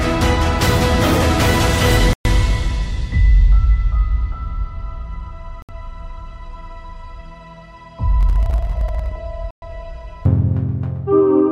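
At 2.13 s the sound drops out cold for about 0.12 s, then again at 5.62 s for about 0.07 s, each time resuming where it left off. That's likely a Bluetooth stall, where interference delayed packets and the headphones' buffer ran empty until resends arrived.

From 8.21 to 9.12 s there's a gritty, tearing burst of processor overload crackle. The processor kept missing its deadlines on tiny buffers of under a millisecond, around seventy times over that stretch, and each miss skipped a sliver of audio, leaving a hard-edged gap.

At 9.51 s the sound goes silent once more, for about 0.11 s, with the same stop-and-resume character as the first two dropouts.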